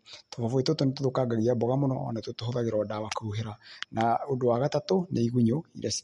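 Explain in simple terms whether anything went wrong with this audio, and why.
Likely MP3 compression, squeezed hard, stripped out everything above about 11 kHz, so the speech sounds dull and watery with smeared edges throughout the clip.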